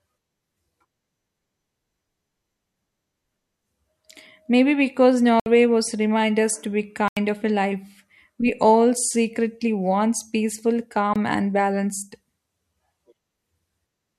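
Three abrupt holes drop the speech to dead silence: 5.40 s for 64 ms before "was remind us to", 7.08 s for 85 ms after "remind us to be", and 11.14 s for 21 ms after "all secretly wants peaceful". Each is a block of digital silence, likely an output buffer left unfilled and played as zeros. The second and third lengths fit 4096- and 1024-sample buffers.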